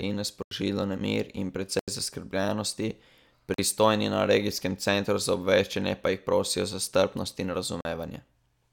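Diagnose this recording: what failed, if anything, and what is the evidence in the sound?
The driver or buffer stage failed, leaving blocks of digital silence. The speech drops abruptly to silence for about 85 ms at 0.43 s and at 1.79 s (after "nemir in"), and for about 43 ms at 3.54 s (before "na regijskem centru za") and 7.81 s (after "prosijo za strpnost in"). These lengths fit 4096- and 2048-sample buffers left unfilled in time. A waveform shows flat silent runs, and a spectrogram shows blank vertical strips.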